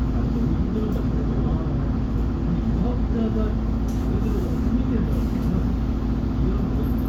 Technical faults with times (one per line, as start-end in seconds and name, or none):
none